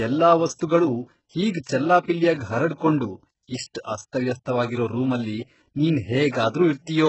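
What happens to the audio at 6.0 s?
At 6.0 s the audio carries the same heavy codec damage heard across the whole clip, likely from HE-AAC compression at a very low bitrate around 8 kbps. Only the lower spectrum is coded. The treble is rebuilt by copying lower bands upward, so s sounds turn gritty, metallic or lispy, with nothing above 8 kHz.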